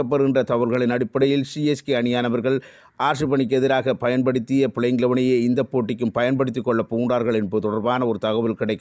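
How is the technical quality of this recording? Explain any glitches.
No glitches or technical faults can be heard here.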